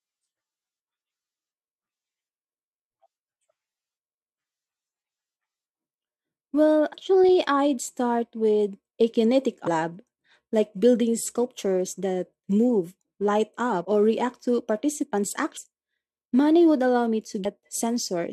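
At 9.66 s, just after "start with a kinetic", the speech lurches forward, and roughly 300 ms of audio goes missing. At 15.56 s, after "or react to participants'", the same thing happens, this time dropping about half a second. These are compressed frames skipped: whole blocks of encoded audio were lost or rejected by the decoder. Each gap fits about 10 and 20 frames of roughly 23 ms.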